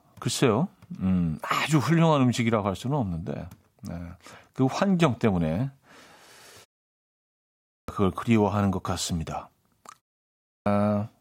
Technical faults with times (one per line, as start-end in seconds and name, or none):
7.48-7.88 clipped start after a pause
10.29-10.66 clipped start after a pause